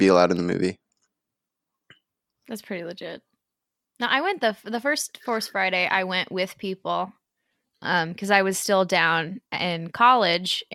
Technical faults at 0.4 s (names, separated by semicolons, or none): none